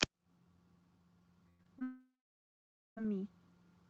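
A speech recording carried over an Opus call path, with its spectrogram energy stopping at about 8 kHz, breaks up in the middle. A burst of packet loss from 1.49 to 1.61 s replaces about 100 ms of audio with a continued, fading buzz or hiss that shows as a smeared, fading continuation before the signal resumes. Short concealed packet losses at 1.63 to 1.67 s and 1.79 to 1.83 s each patch about 20 ms, leaving brief smears or wobbles. From 1.83 to 2.98 s the sound fades into a fading buzz or hiss and then about 0.9 s of near-silence, a flat gap in the waveform that is likely a long network dropout.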